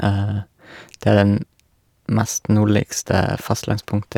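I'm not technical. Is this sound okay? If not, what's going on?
Yes, this speech recording is fine, with no technical problems to hear. Nothing in it needs fixing or explaining.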